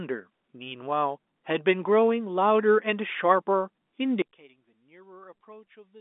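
From 4.22 s to the end, the speech drops by about 26 dB and turns faint. The cause is likely one channel inverted: one side's polarity is reversed, so the centred speech cancels in the mono sum, leaving only the channel difference.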